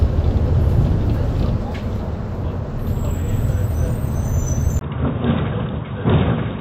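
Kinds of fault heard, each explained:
Input switched to a poorer device: At about 4.79 s the sound changes character abruptly and stays that way to the end. The likely cause is the recording input moving to a weaker microphone or a headset's call profile. A brief gap of about 20 ms marks the switch. Afterwards nothing reaches above 3.8 kHz, so the audio turns dull and boxy. The level drops by roughly 5 dB, and a faint new background noise appears well below the signal.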